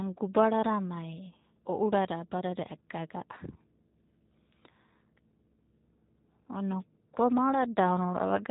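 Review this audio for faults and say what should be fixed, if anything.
The whole clip carries G.729 codec damage, and it is plainly audible. Nothing above 3.8 kHz survives, but unlike a simple low-pass or telephone-band filter, the speech also sounds slightly rough and synthetic, because each 10 ms frame is rebuilt from a vocal-tract filter, a pitch predictor and a few pulses rather than passed through. That buzzy, resynthesised texture fits an 8 kbit/s G.729A link. To prevent it, capture or transmit this path with a wideband codec such as G.722 or Opus at a higher bitrate.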